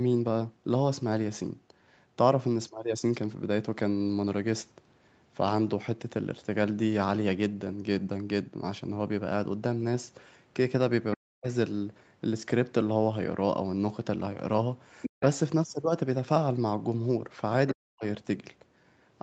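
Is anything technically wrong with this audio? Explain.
Yes. There are two kinds of fault, both coming from the call's echo handling.

Speech suppressed in double talk occurs at 11.16–11.47 s, 15.17–15.21 s and 17.72–18.04 s. The talker's speech drops sharply, by up to about 40 dB, in short gaps of roughly 300 ms, 40 ms and 300 ms. This is likely the echo canceller mistaking simultaneous talk for echo and attenuating everything.

The other side's voice leaks through at 15.02–15.23 s and 17.67–17.72 s. A second voice is audible under the talker, about 5 dB below the speech in the first instance and about 15 dB below in the second. The likely cause is loudspeaker playback that the echo canceller failed to remove from the microphone signal.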